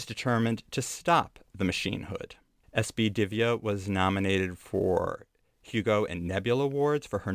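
No technical fault can be heard anywhere in this speech recording. Nothing in the sound breaks up, cuts out or shifts.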